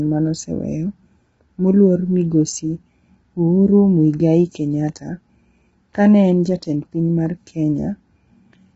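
Low-delay AAC compression runs through the whole clip, from start to finish. The speech sounds rough and grainy, with a hiss-like fill between the harmonics, and nothing remains above 7.8 kHz. The likely cause is AAC-ELD, the low-delay codec used for video calls. Its very short frames resolve pitch harmonics poorly and spend bits inefficiently, and the heavy damage heard here fits a low bitrate of around 16 kbps.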